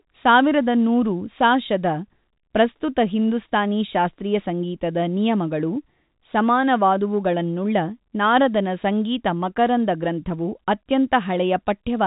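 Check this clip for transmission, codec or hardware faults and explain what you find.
No faults found.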